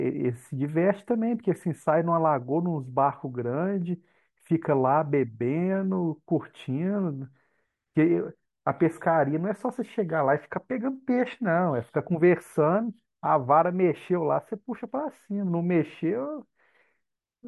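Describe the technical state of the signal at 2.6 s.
At 2.6 s the speech signal is intact, with no fault to be heard at that moment.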